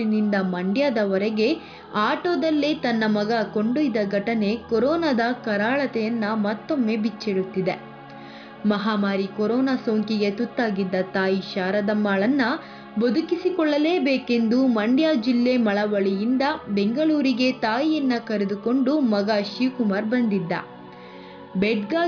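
Nothing here goes wrong at any point, so there's no technical fault to point out in this audio.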